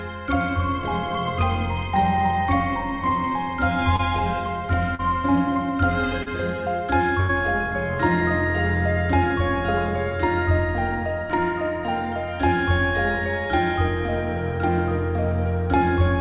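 Short concealed packet loss occurs at 3.96 s, 4.95 s and 6.23 s. Each time, the receiver papers over a 20 to 40 ms hole by extending the preceding sound, leaving a brief smear or wobble. At 7.20 to 7.31 s comes a burst of packet loss: about 80 ms of audio is missing, bridged by a fading continuation before playback resumes further on. Throughout, the band stops at 4 kHz, which fits a narrowband G.711-style call path.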